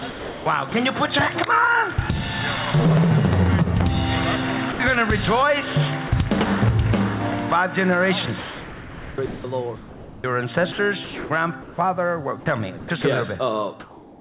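Audio carried over a narrowband call path, with nothing above 4 kHz, which fits G.711 mu-law at 64 kbps, and its sender's voice detector repeatedly misjudges the sound. Sound chopped by the voice detector occurs where the detector likely toggled transmission on and off several times within a stretch: 0.00 to 0.72 s (about 0.4 s filled in), 8.26 to 11.78 s (about 1.9 s filled in, the worst passage), and 12.78 to 13.04 s (0.14 s filled in). Each time, parts of the sound are swapped for synthetic fill, so the passage turns choppy. Sound dropped by the voice detector, likely from brief moments mistaken for background, cuts single short pieces: 40 ms at 1.94 s, 80 ms at 4.72 to 4.80 s, and 40 ms at 6.08 s. In each gap the real audio gives way to flat noise and then returns when the detector fires again. Comfort noise in place of the background runs from 13.8 s to the end, likely because transmission paused once the detector heard nothing worth sending. 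The receiver fills this pause with generated noise. The background there sits about 24 dB below the loud parts and is about 2 dB quieter than the real background before it. It sounds steady and featureless, without the detail of the genuine background.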